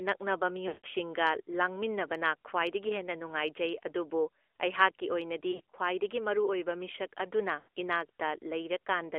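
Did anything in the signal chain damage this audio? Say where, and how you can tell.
Yes. Throughout, the speech sounds buzzy and synthetic, squeezed into about 300 Hz to 3.4 kHz. That is the AMR narrowband mobile codec at the codec stage, fitting its 10.2 kbps mode.

At 0.68–0.87 s, 5.52–5.74 s (brief scattered dropouts) and 7.60–7.68 s, the sound smears, warbles and fades. These are lost AMR speech frames on the network, concealed by repeating decaying parameters.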